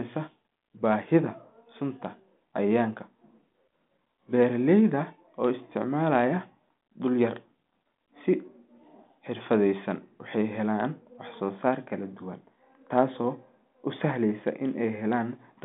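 No technical faults can be heard in this speech, which is carried over a 40 kbit/s G.726 telephone channel passing roughly 200 Hz to 3.6 kHz.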